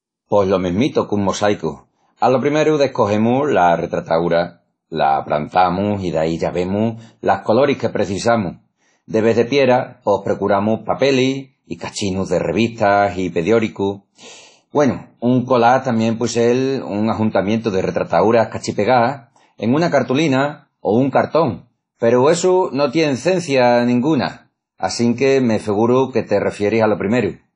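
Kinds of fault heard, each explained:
WMA compression: throughout, the speech sounds washy and ringing, with hiss that breathes and nothing above 10 kHz, likely from a WMA encode near 32 kbps.
Pre-echo: at 2.17 to 2.22 s, a 54 ms smear of hiss precedes an attack, as noise sized for the block's loud end fills its quiet start.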